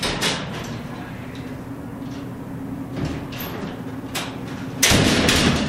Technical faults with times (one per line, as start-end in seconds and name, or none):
2.51-2.53 skip ahead
2.63-4.33 jitter buffer speed-up